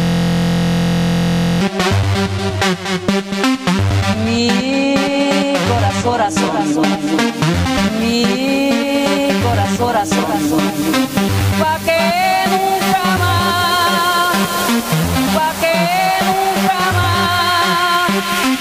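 From the start to 1.61 s, a system hang loop is under way. A frozen system replays one 23 ms slice, which fits a 1024-sample buffer, producing a steady 43 Hz buzz.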